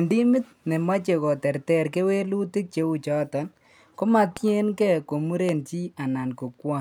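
A speech clip with two loud pops, at 4.37–4.39 s and 5.49–5.51 s, each a single sharp spike roughly 10 dB above the speech, likely from an electrical voltage glitch. On a spectrogram each shows as a thin vertical broadband stripe; on the waveform, as an isolated spike.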